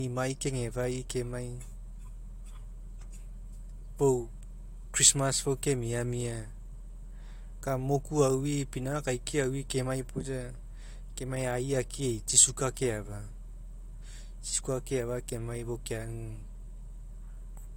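Speech runs throughout with nothing above 16.6 kHz, visible on a spectrogram as a hard flat ceiling across the whole clip. It is likely low-bitrate audio saved at a high bitrate: artefacts that fit an earlier encode near 64 kbit/s survive in the larger 256 kbit/s MP3.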